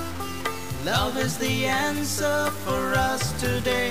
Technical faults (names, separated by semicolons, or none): low bit depth without dither